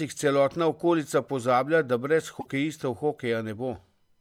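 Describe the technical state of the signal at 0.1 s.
At 0.1 s the signal is intact, with no audible dropout, distortion or other fault at that moment.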